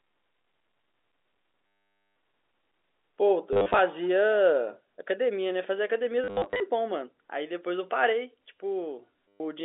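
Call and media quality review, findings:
Packet loss with last packet repeated, four events:

1.67–2.16 s: continuous 490 ms robotic buzz at about 100 Hz, which fits 10 ms packets.

3.53–3.79 s: scattered stutter, 170 ms lost, runs up to 40 ms.

6.24–6.6 s: 250 ms lost over 360 ms, runs up to 70 ms.

9.28–9.4 s: 120 ms repeat.

Component: receiver concealment replaying the last packet. Splices ignore the pitch period. The narrowband G.711 A-law path, 300 Hz–3.6 kHz, sounds clean.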